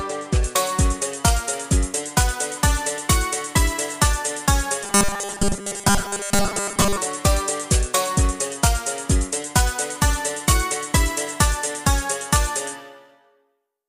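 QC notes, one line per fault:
0.43–13.89 s, pre-emphasis left on: From 0.43 s to the end the top end is lifted by about 13 dB at 10 kHz relative to 1 kHz, following the standard 75 µs FM emphasis curve, and the matching de-emphasis was never applied. The sound is thin, glassy and hissy. Unlike a general treble shelf or a bright microphone, the boost keeps climbing smoothly with frequency above about 2 kHz instead of levelling off.
4.84–6.98 s, robotic sound from repeated short buffers: For about two seconds the sound collapses into a rigid, metallic buzz fixed at 200 Hz. The buzz comes from a 5 ms chunk being replayed over and over, with most of this stretch, roughly 70%, filled by repeats while the real audio is skipped. This is likely caused by audio arriving too seldom at the playback buffer. A codec or vocoder artefact would warble, but this buzz holds one pitch while loosely tracking the underlying loudness.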